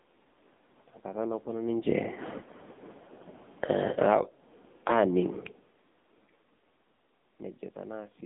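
Buzzy, synthetic-sounding speech runs through the whole clip, confined to a narrow telephone band from about 200 Hz up to 3.7 kHz with nothing above. The background churns into a swirling warble. That is AMR narrowband mobile codec damage, heavy here. The thin, reedy quality points to a very low bitrate, around 6.7 kbps, where the vocal-tract model has too few bits to rebuild the voice cleanly. From 3.54 s the level sinks by about 11 dB until 5.09 s, voice and background dropping together. This is automatic gain falling, a control easing its gain down after judging the input too loud. Overlapping it, from 4.14 s to 5.54 s, the sound swells back by about 10 dB. That is automatic gain rising, the control pushing gain up again once the input seemed too quiet. The level shifts near 1.5 s and 5.5 s come from the talker moving relative to the microphone.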